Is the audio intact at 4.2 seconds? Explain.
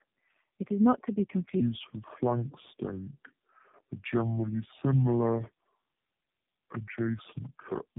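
No. From 1.60 s to the end, the clip plays at the wrong speed, about 0.65 times normal, so the audio is slow and sits roughly seven semitones low. This is likely a resampling or clock mismatch during playback or editing.

The whole clip, including 4.2 s, also shows tandem speech coding: three low-rate speech codecs in a row, consistent with AMR-NB and G.729A. Each codec re-encodes the previous one's errors, leaving speech rough, warbly and muffled, with nothing above 3.7 kHz.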